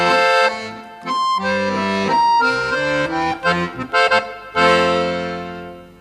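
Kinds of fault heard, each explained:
Video or display buzz: From about 1.48 s to the end, a steady buzz at 50 Hz sits under the sound with a gritty hash riding above it, joined by a thin, very high whine at 15.6 kHz, all roughly 30 dB below the main signal. A screen or video cable is leaking into the audio path: the buzz follows the picture's field rate and the high tone comes from its line scanning.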